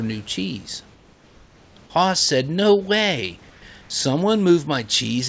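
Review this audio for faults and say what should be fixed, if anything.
From 0.94 to 1.76 s and again from 3.50 to 3.62 s, the room background turns smooth and featureless and drops about 3 dB. This is likely comfort noise in place of the background: the sender paused transmission during silence and the receiver synthesised substitute noise.

Disabling discontinuous transmission on the sending side would keep the real room background flowing through pauses.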